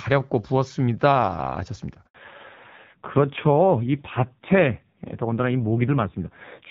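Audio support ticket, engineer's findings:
Handover gap, 2.07 to 2.15 s: sound decays within a few tens of milliseconds, then dead air for the rest of the 80 ms gap. Network handover in the call path. No speech frames delivered during the link switch, so content in that span is lost.

Fallback to narrowband, 2.15 s to end: everything above 4 kHz gone. Sound duller and rougher than the clear wideband section before the gap. Codec renegotiated after handover, which fits a drop from HD Voice to a narrowband codec around 5.9 kbit/s.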